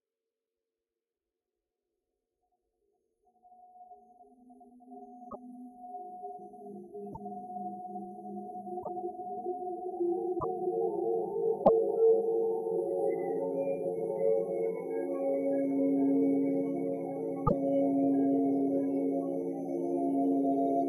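At 5.29, 7.12, 8.82, 10.38, 11.63 and 17.46 s the sound skips forward with a brief garbled glitch of about 60 ms, roughly three 24 ms frames. This is likely a broken MP3 bit reservoir: after frames went missing, decoding drew on stray bytes.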